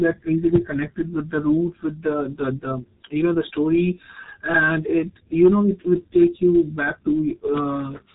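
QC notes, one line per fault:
Throughout, G.723.1 codec: the speech sounds muffled and hoarse, with smeared consonants, because the coder squeezes it to about 6.3 kbit/s and rebuilds it from a slowly updated voice model in 30 ms frames. Nothing survives above 3.8 kHz, so the spectrogram shows a hard ceiling there with empty space above, and the energy below looks blocky in time, stepping frame by frame instead of changing smoothly. The codec damage is heavy.
4.55 to 4.57 s, 5.42 to 5.48 s and 6.22 to 6.25 s, hard clipping: peaks ran past what the signal path could carry and were sliced flat, by about 1 dB just after "you know the story", by about 4 dB just before "know it would", and by about 1 dB between "know it would" and "you back to". On the waveform the tops sit pressed against a flat line. On the spectrogram each event shows a brief vertical streak of added harmonics.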